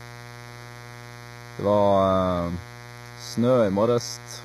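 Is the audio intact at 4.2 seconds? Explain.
No. At 4.2 seconds the audio carries mains buzz, as it does for the whole clip. Sharp switching spikes from the power supply, twice in each 60 Hz cycle, ride along with the speech and produce a ladder of harmonics reaching well into the kilohertz range. The result is a steady, raspy buzz sitting only about 15 dB below the speech.

Channel delay with comb filtering is also present throughout, including at 4.2 seconds. One channel lags the other by a fraction of a millisecond, and when the two are folded to mono, anything common to both cancels at evenly spaced frequencies. The first notch falls near 3 kHz, right in the range that gives speech its clarity, so the voice sounds hollow and slightly phasey, with fixed gaps that never move.

The treble at this point is rebuilt rather than genuine. Sibilants come out gritty and lispy, with a metallic edge. 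This is likely HE-AAC compression at a very low bitrate, around 20 kbps. The codec keeps only the lower spectrum and fills the top by copying lower bands upward under a coarse envelope. The upper range still reaches high, but its harmonics no longer line up with the real ones, and the damage is plainly audible.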